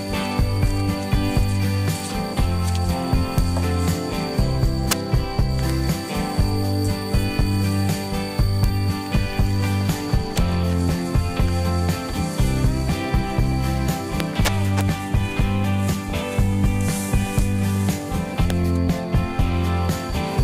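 Integer overflow produces sharp cracks at 3.38, 4.91, 8.64 and 10.38 s, a longer stretch from 14.20 to 14.81 s, and single cracks at 17.39 and 18.50 s. Peaks that exceed the integer limit wrap around to the opposite extreme instead of being held there. The worst are at 4.91 s (about 8 dB over) and 18.50 s (about 10 dB over). Clipping flattens a peak and sounds fuzzy. Overflow flips the waveform across the full range, so each crack is violent and abrupt.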